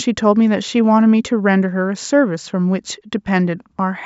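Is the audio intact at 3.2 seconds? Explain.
Yes, the speech at 3.2 seconds is intact, with no fault at that moment.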